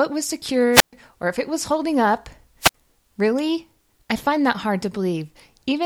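The analogue radio link from the wireless microphone fades twice, and each time the receiver's squelch mutes the output. This is a wireless microphone squelch dropout. From 0.72 to 0.93 s, hiss swells before the speech cuts to near silence for 126 ms. A shorter one from 2.60 to 2.74 s leaves a 54 ms hole.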